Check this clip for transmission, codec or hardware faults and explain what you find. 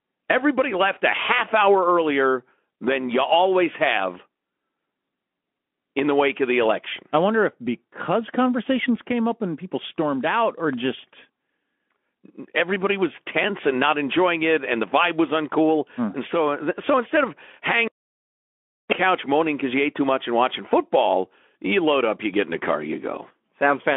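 Checking the clip turns up no transmission, codec or hardware faults.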